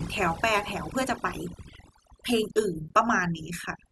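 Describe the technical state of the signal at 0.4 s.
At 0.4 s the speech carries overdone noise removal, which runs through the whole clip. A noise reducer set far too hard is pulling individual frequency bands down or out whenever they sit close to its noise estimate, taking the quieter parts of the voice with them. The background drops and breaks up into twinkling specks. Unlike a noise gate, which mutes everything at once, this removal works band by band.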